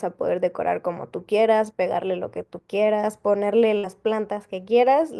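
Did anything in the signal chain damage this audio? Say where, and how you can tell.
Yes. A burst of packet loss damaged it at the network stage, from 3.77 to 3.85 s. The receiver extended the last sound for about 59 ms, fading it as a held buzz or hiss. Speech then resumes with roughly 60 ms missing.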